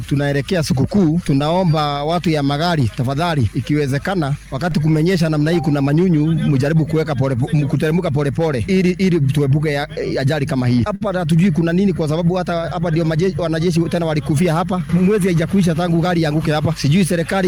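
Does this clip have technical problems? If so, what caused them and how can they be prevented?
Yes. At 1.28 s and 4.71 s a DC step shifts the waveform's zero line abruptly, heard as a low thump, and each offset then decays away through a 2 Hz high-pass. Keeping input switching and converter recalibration out of live recording prevents it.

From 10.95 to 11.08 s there is a short stall from a late packet. The jitter buffer ran dry, and the receiver stretched the preceding sound by 55 ms until the packet arrived, so nothing is lost but the sound lingers unnaturally. A larger or adaptive jitter buffer prevents this.

Between 13.69 and 14.41 s a jitter buffer speed-up plays the audio at 107% speed with unchanged pitch. Short pitch-period segments, about 50 ms in total, were trimmed to cut the accumulated delay, so the passage sounds hurried. A steadier network path prevents the packet bunching behind this.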